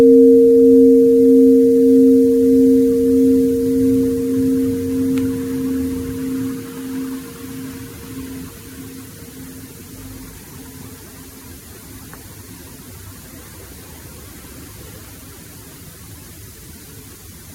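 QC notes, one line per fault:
No faults heard anywhere in the clip.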